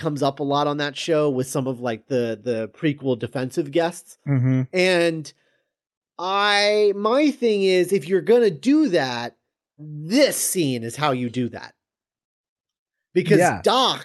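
No technical faults can be heard in the speech, so there are no faults to describe in time order.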